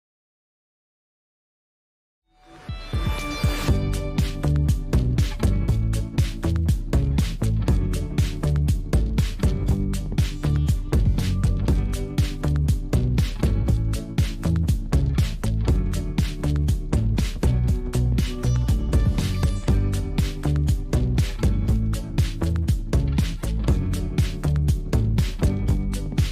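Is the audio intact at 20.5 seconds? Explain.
Yes, the audio is intact at 20.5 seconds, with no fault audible at that moment.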